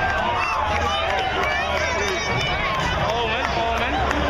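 A block of digital silence at 0.54 s lasts only about 1.25 ms, so it is heard as a tick or dip in the audio rather than a gap. The output dropped to zero with no fade, because a buffer went unfilled in time or a calculation produced invalid values. At 1.97 to 2.00 s, a disturbance of about 30 ms, matching a 26.1 ms frame, is likely a broken MP3 bit reservoir: after frames were lost, the next frame borrowed data from bytes belonging elsewhere, so the audio jumps and decodes wrongly briefly.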